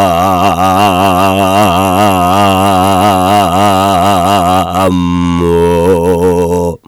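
Hard clipping runs throughout: a stage is driven about 10 dB past its limit, so peaks are cut flat, roughly 7% of samples, giving harsh fuzz on every loud sound.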